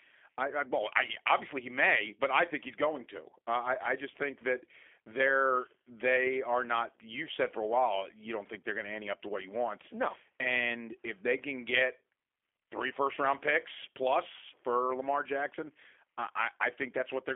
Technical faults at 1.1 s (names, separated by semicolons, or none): G.729 codec